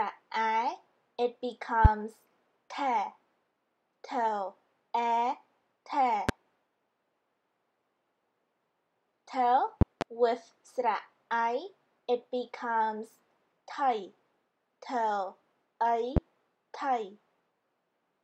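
A loud pop lands at about 1.85 s and again at 6.29 s, a double pop follows between 9.81 and 10.04 s, and a last one comes at 16.17 s. Each jumps roughly 20 dB above the signal, a sharp thump most likely from a voltage step such as a plug, switch or static discharge. Unlike a dropout, the sound carries on unbroken underneath rather than gapping.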